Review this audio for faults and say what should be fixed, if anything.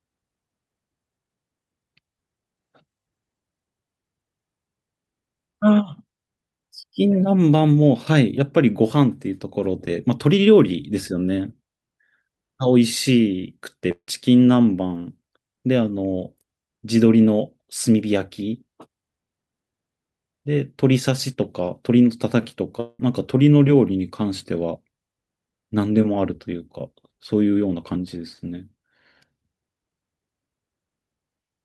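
At 13.91 to 14.09 s and again at 22.80 to 23.00 s the sound thins into a fading buzz, then brief silence (about 70 ms the first time, about 10 ms the second) before it resumes with roughly 160 ms and 190 ms missing. This is likely a long network dropout: the receiver stretched the last sound across the gap, then gave up until packets arrived again.

At 22.74 s there is a quick smear, a short concealed packet loss. About 10 ms of audio never reached the decoder in time, so it extended the preceding sound briefly and blended back into the real signal, just before the second dropout.

To prevent these, improve network stability with a wired or less congested link, and add forward error correction or a somewhat deeper jitter buffer so short losses are recovered rather than concealed.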